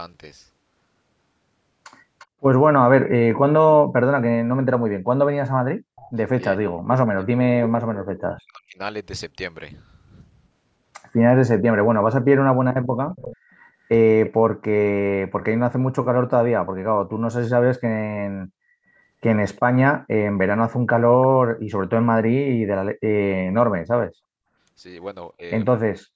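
From 2.19 to 8.21 s there is an echo leak: a faint copy of the speech returns 350 ms late, about 20 dB down. The likely cause is loudspeaker sound that the far-side echo canceller failed to remove. On a spectrogram it appears as a weaker ghost of the speech pattern shifted 350 ms to the right.

Between 5.73 and 8.79 s the speech is suppressed in double talk. It drops by up to about 40 dB in chunks totalling roughly two seconds, and the waveform envelope shows abrupt holes. The same suppression returns from 12.13 to 15.92 s, with about 0.4 s affected.

Inside that span, from 13.09 to 14.3 s, the echo leak comes back louder, at about 15 dB below the speech. A brief faint echo, about 35 dB down, sits at 19.56 to 19.6 s.

The last suppression, from 22.83 to 25.43 s, clips out about half a second of speech.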